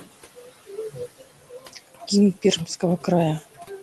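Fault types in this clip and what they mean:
Noise suppressor artifacts: A noise suppressor works frame by frame and pulls down every frequency band it judges to be steady background. Here the room noise, sitting about 17 dB under the speech, is lowered by about 17 dB in the gaps. Under the speech it comes back up, so the background pumps in and out with the voice.
Speech cut by the noise suppressor: The suppressor mistook parts of the speech for noise and turned them down along with the background. This happens four times: 0.36 to 0.49 s, dropping about 13 dB; 0.91 to 2.09 s, the longest stretch, with roughly half a second affected and dips near 18 dB; 2.66 to 3.06 s, about 11 dB; and 3.4 to 3.7 s, about 16 dB. In those spots soft consonants and word endings sound swallowed or faint.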